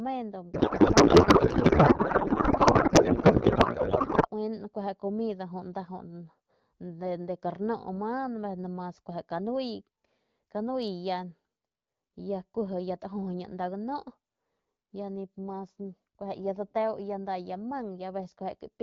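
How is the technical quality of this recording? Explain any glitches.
One clear glitch: a codec payload misread at the start of the recording. The speech is carried by an AMR wideband (HD Voice) codec, with only light coding damage that fits a rate of around 12.65 kbit/s.

From 0.54 s to 4.30 s the speech is replaced by garbled noise and warble that barely tracks what is being said. This is a payload misread: the sound points to octet-aligned AMR frames being parsed as if they were in bandwidth-efficient packing. The decoder still accepts each frame as valid, but it pulls parameters from the wrong bit positions, so it synthesises nonsense instead of the speech. Correct decoding resumes at 4.30 s, once both ends agree on the format again.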